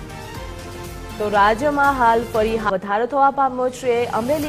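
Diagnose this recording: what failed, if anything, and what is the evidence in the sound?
At 2.65 to 2.71 s the sound jumps abruptly forward with a brief blip, the material on either side not joining up. The stage is network delivery to playback, and the likely cause is a stream segment skipped: one chunk of the segmented stream failed to arrive and the player carried on from the next. On the waveform there is a hard discontinuity with no fade; on a spectrogram, a thin broadband vertical stripe where the spectral content changes at once.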